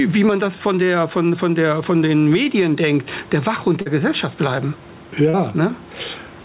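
A speech recording with level that pumps throughout: the gain swings by about 10 dB, likely from gain pumping by a fast limiter riding an overdriven microphone gain. Short concealed packet loss appears at 2.44 to 2.47 s, between "von der von den" and "denkt der", and again at 3.81 to 3.88 s and 5.30 to 5.35 s. Each gap of 20 to 40 ms is filled by extending the preceding sound, heard as a brief smear. The band stops near 4 kHz, which fits a narrowband G.711-type call codec.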